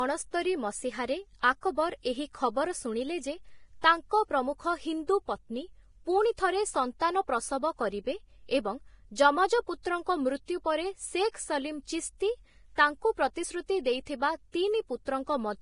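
Speech all the way through, and it has the hissy, grainy sound of heavy low-bitrate Vorbis compression, likely from encoding at a very low quality setting. Nothing comes through above about 10.6 kHz, and the treble that remains has been quantised so coarsely that its detail turns into a noisy wash. That roughens the voice's tone and blurs the consonant attacks, which fits a bitrate of somewhere around 29 kbps.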